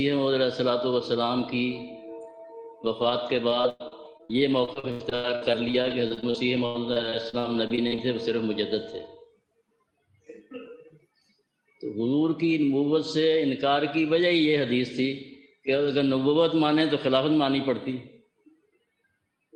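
The audio passed through a call path whose top end stops near 12 kHz, which fits Opus at around 32 kbps. From 2.85 s to 7.99 s there is repeated packet loss, with a robotic sound. Short holes keep opening, many of them across the stretch. The longest runs to about 100 ms. Each hole is filled by stretching the last bit of sound forward. Roughly a fifth of the stretch, about a second in all, is rebuilt this way. The result is choppy, with pieces missing.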